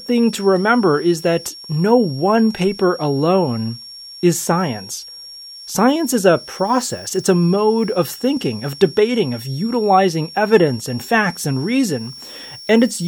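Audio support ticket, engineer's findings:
High whistle under the speech throughout, wandering between 5.47 and 5.57 kHz, roughly 20 dB down. Switching supply whistle: converter in audible burst mode or beating with another supply, pitch shifting with load.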